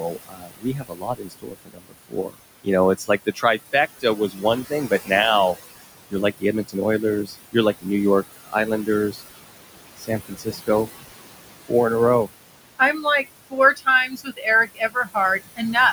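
A speech recording with noise suppressor artifacts throughout: the room noise, about 12 dB below the voice, is pulled down by about 20 dB between phrases and rises again under the voice, a smoother change than a gate's hard on-off steps. There is speech cut by the noise suppressor at 0.0–5.56 s (around three seconds in all), 6.1–9.21 s, 9.97–10.89 s and 11.65–15.75 s (each a second or less). Soft consonants and quiet endings fade by up to about 22 dB, sinking with the background rather than breaking off abruptly as in a dropout.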